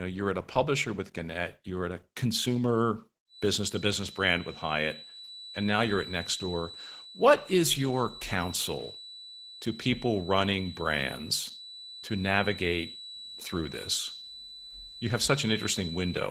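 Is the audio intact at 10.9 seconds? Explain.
No. At 10.9 s two faults are present. The whole clip carries Opus voice compression, and its damage is plainly audible. The coder appears to run in hybrid mode, with linear-prediction coding for the lower band and a transform layer above 8 kHz. The band stays full, but the excitation is coded coarsely, which fits a bitrate near 16 kbps. The speech sounds hoarse, slightly muffled and faintly robotic.

A feedback whistle also sounds from 3.26 s to the end of the clip, so it covers this moment. A steady tone at 4 kHz sits about 15 dB below the speech. It is thin and stays at one pitch, and it swells and fades slowly in level. The likely cause is a loudspeaker-to-microphone loop held right at the edge of feedback, sustaining that one frequency without building up.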